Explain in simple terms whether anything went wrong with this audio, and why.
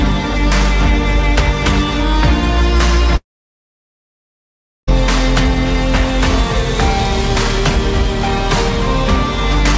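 Something went wrong between about 3.16 and 4.89 s: the sound suddenly breaks off, with a brief fading buzz or hiss, then goes quiet for the rest of that stretch before picking up again further along. That points to a long network dropout as the likely cause: roughly 1.7 seconds of audio never arrived, so the receiver briefly stretched the last sound, then fell silent, and the missing part is simply gone when playback resumes.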